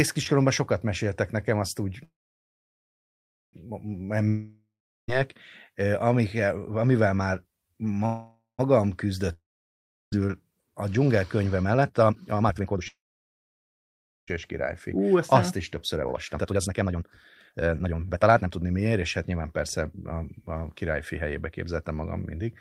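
A speech clip interrupted by three call audio freezes, at 2.03–3.55 s, 8.06–8.61 s and 12.88–14.29 s, the last just before "és királyfi". Each time the last sound is stretched into a fading buzz, then nothing, for about 1.42 s, 0.14 s and 1.31 s. The cause is likely held-up packets draining the jitter buffer. Speech resumes where it stopped, with nothing lost, but the delay grows by the filled length, about 1.5 s, 0.53 s and 1.4 s. On a spectrogram each freeze is a smeared horizontal band fading to blank, and the waveform flattens to a near-empty stretch.

Two long network dropouts sit at 4.28–5.10 s and 9.33–10.14 s, again a fading buzz followed by silence, about 0.39 s and 0.71 s long. Here speech is actually lost, about 0.8 s and 1.26 s of it, and the second dropout cuts the delay by roughly half a second. The likely cause is a stretch where no packets arrived at all, so the waveform shows a clean jump in content across the gap.

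Two jitter buffer speed-ups follow: 10.60–12.81 s at 145% speed, ending at "és királyfi", and 14.97–22.42 s at 126% speed, starting right after it. The buffer, swollen with late audio, trims pitch-period-length pieces, about one second in total and then roughly two. Speech sounds hurried at unchanged pitch. The spectrogram shows compressed syllables with harmonic spacing intact.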